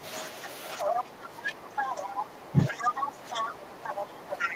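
From 0.00 to 0.04 s, and again from 0.80 to 2.17 s, 2.64 to 3.53 s and 3.84 to 4.56 s, the other side's voice is leaking through. It is faint at first, then slightly louder than the talker. This is likely residual loudspeaker echo that the canceller missed, heard as a second, separate voice. From 0.84 s to the end, speech is suppressed in double talk: the talker's own level sinks by up to about 10 dB while the other side speaks. This is a dip in the talker's voice rather than an added voice.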